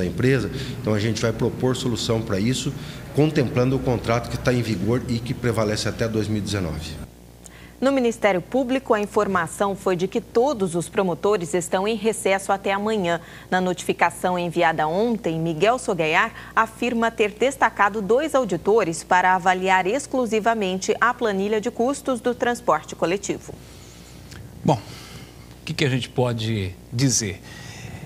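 Throughout the clip, a screen or video cable is coupling into the audio path, producing video or display buzz: a rasping hum at the 59.94 Hz field rate with hash above it, plus a whine at the 15.7 kHz line rate, sitting roughly 25 dB under the sound.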